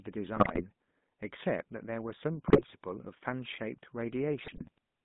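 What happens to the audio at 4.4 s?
GSM bit errors break out from 4.42 to 4.78 s. Corrupted filter, pitch and gain values reach the decoder, so the spectrum warps and the level jumps frame by frame, giving squawks, pops and gargling. Underneath, the GSM full-rate codec continues: pulse-driven vocal-tract modelling within a 150 Hz to 3.6 kHz band leaves the speech plainly buzzy and gravelly.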